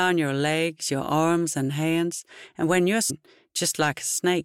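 At 3.09 s the sound jumps abruptly forward with a brief blip. This is likely a stream segment skipped: one chunk failed to load and playback continued with the next.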